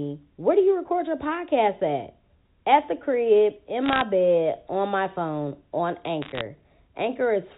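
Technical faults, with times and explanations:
3.86–4.02 s and 6.22–6.41 s, bit errors on a digital phone line: two short bursts of sharp ticks and crackle over the speech, first between "the crib in" and "bed on my phone", then just after "on my phone on". Bits flipped in the 8-bit G.711 A-law samples, at roughly half a percent to under one percent. Each flip corrupts one sample, and hits on sign or high-order bits jump it far off the waveform, producing clicks within band-limited telephone audio.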